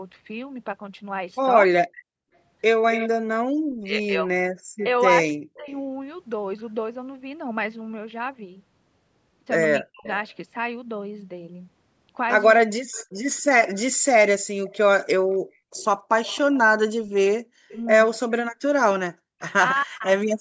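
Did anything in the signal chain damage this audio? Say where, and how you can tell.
Yes. Between 0.05 and 5.7 s, 9.82 and 13.1 s, and 19.74 and 20.07 s, the speech dips by up to about 40 dB and drops out in short pieces. The stage is call processing: this is likely speech suppressed in double talk, where the echo canceller attenuated the near talker along with the echo.

A delayed copy of the speech, trailing by 266 ms, runs from 2.92 to 4.83 s at about 10 dB below the speech, and from 10.06 to 19.53 s at about 25 dB below. This is likely an echo leak: a loudspeaker's output passed the far end's echo canceller and returned over the call.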